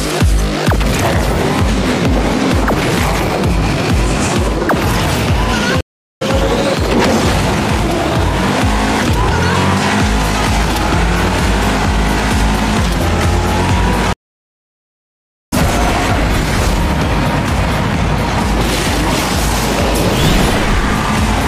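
Stream reconnect, at 5.81 to 6.23 s and again at 14.13 to 15.54 s. Each time the connection dropped, the player fell silent, then rejoined the stream with a fresh decoder. The first gap lasts 0.40 s, and the sound picks up roughly 0.3 s further on. The second gap runs 1.39 s and resumes about 0.7 s ahead, so material is skipped after both gaps.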